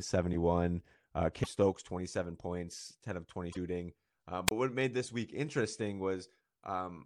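At 1.43 to 1.47 s and again at 3.52 to 3.57 s, the speech skips forward with a brief glitch. The likely cause is a broken MP3 bit reservoir, where 26.1 ms frames lost their borrowed data. From 4.47 to 4.51 s, a wireless microphone squelch dropout mutes the signal for about 27 ms. The speech then returns on "what made this week".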